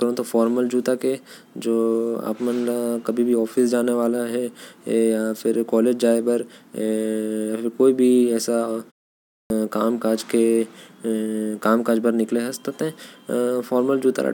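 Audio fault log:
9.17–9.50 s, clipped start after a pause: after a short gap of about 0.34 s, the output path appears to drop into an idle state and needs time to wake again, so the first 0.33 s of the following speech never reaches the listener. The sound bursts in abruptly, missing its onset. On a waveform the envelope jumps from flat silence straight to full amplitude with no rise; a spectrogram shows energy appearing across all bands at once, with no onset.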